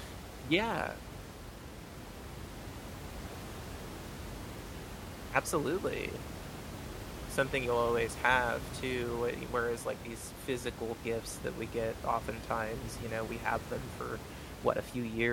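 A speech recording with no technical fault to point to. Background noise from the room sits about 10 dB below the speech and belongs to the recording itself.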